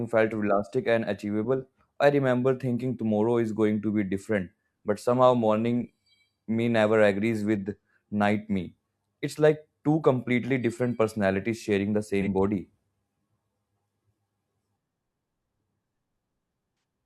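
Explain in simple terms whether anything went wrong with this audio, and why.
Two brief AAC frame loss with concealment glitches, at 12.22 to 12.28 s and 16.75 to 16.83 s: missing audio got patched with a smeared, noisy guess.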